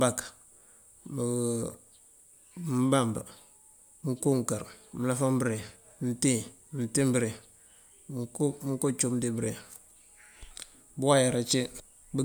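Nothing technically wrong turns up in this speech recording, so there's no fault here to time or trace back to a cause.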